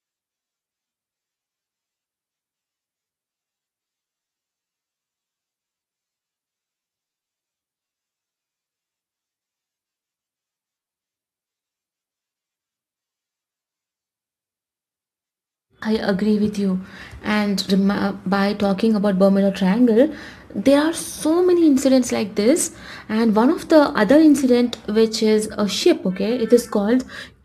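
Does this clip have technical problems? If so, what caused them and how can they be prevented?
Yes: sample clock jitter throughout the speech adds a hiss-like roughness tracking loud, bright passages, from timing errors of a few microseconds, sitting roughly 35 dB below the signal. Prevent it with a stable, low-jitter converter clock.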